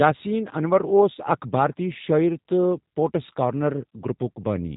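From start to finish the speech carries G.729 codec damage, plainly audible as a rough, slightly synthetic buzz. The voice is rebuilt from a filter and sparse pulses, consistent with an 8 kbit/s VoIP link. A spectrogram shows nothing above 3.8 kHz and smeared, blocky harmonics.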